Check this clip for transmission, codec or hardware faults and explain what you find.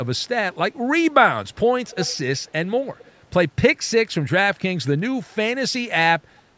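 One fault is present, an echo leak, at 1.84–2.20 s, 2.37–2.52 s and 2.98–3.12 s. A delayed copy of the speech returns 260 ms behind the original. It is clearest in the first stretch, around 15 dB below the speech, and much fainter in the later two. The likely cause is a loudspeaker at the far end whose echo canceller let part of its microphone pickup back into the call.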